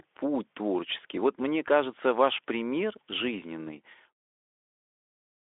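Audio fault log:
No fault: the speech sits in a telephone-like band of about 300 Hz to 3.5 kHz with nothing above 3.7 kHz, consistent with Speex coding over such a line, and it fades out smoothly from about three and a half seconds until the fade completes at 4.22 s.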